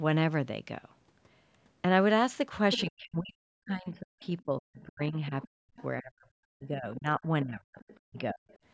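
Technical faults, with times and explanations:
2.72–2.81 s, 4.24–4.42 s, 5.26–5.83 s, 7.8–8.0 s, 8.49–8.58 s: other side's voice leaking through. A second voice, from roughly 10 dB down at 2.72 s to around 35 dB down later, likely loudspeaker echo that the canceller left in. On a spectrogram it shows as harmonic traces under the main speech.
2.84–8.44 s: speech suppressed in double talk. The main voice repeatedly dips, by as much as roughly 40 dB, for about four seconds in total, likely because the echo canceller turned everything down while both sides spoke. The waveform shows sudden envelope drops, and the spectrogram shows gaps and missing high bands.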